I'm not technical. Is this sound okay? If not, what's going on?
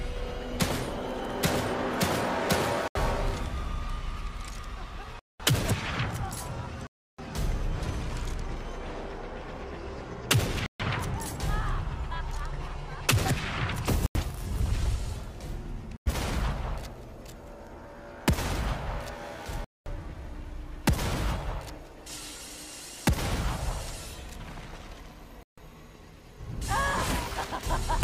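No. Bluetooth stalls at 2.88, 5.19, 6.87, 10.66, 14.06, 15.97, 19.64 and 25.43 s: the sound drops to silence for roughly 0.07 to 0.3 seconds, then carries on. Likely cause: wireless interference delayed the audio, so the headphones ran out and briefly paused.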